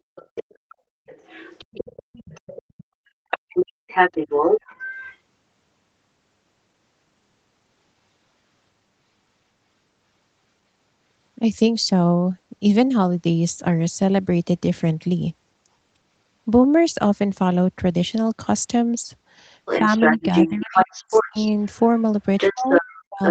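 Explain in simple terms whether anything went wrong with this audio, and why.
Two things go wrong in this speech clip, and both come from the call's echo handling.

The first is the other side's voice leaking through. A second voice can be heard behind the talker at 0.15 to 0.75 s, 1.07 to 2.84 s, 3.3 to 5.17 s, 19.65 to 21.66 s, and from 22.37 s to the end. In the first two stretches it is fairly faint. In the later three it is about as loud as the talker. The likely cause is the talker's loudspeaker. The other person's voice came out of it, the microphone picked it up again, and the echo canceller did not remove it all.

The second is speech suppressed in double talk. Both people speak at the same moment, and the talker's own voice gets pushed down. This happens between 19.81 and 21.37 s, where it adds up to about a second. It happens again from 22.51 s to the end. At its worst the talker almost disappears. 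The echo canceller likely could not tell the talker apart from the echo, so it turned both down.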